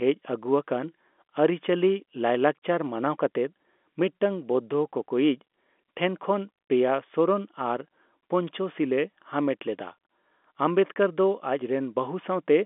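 No technical faults can be heard anywhere in the speech, which is carried over an ordinary telephone line.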